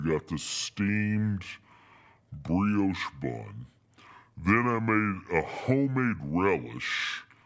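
From the first second to the last, the speech runs slow and low. This is a wrong sample rate fault. The samples reach the output at a slower rate than they were captured at, and nothing converts them. Everything plays at about two-thirds speed, and pitch falls by about 7 semitones, close to a musical fifth. That ratio fits audio recorded at 24 kHz being played at 16 kHz. The voice sounds deep, heavy and dragged.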